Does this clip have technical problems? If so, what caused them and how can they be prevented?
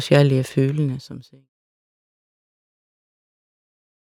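No, there's nothing wrong here; the speech simply eases down in a smooth fade-out running from the very beginning to 1.5 s, just as an editor would shape it.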